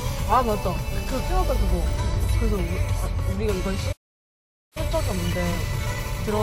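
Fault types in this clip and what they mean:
Playback stall: the sound cuts to silence at 3.92 s for about 0.83 s, then resumes; likely the player ran dry of data or was blocked.
Time-compressed catch-up: from 4.77 s to the end the sound runs hurried, about 1.1 times normal speed at unchanged pitch, as the player trims its backlog with small cross-faded cuts.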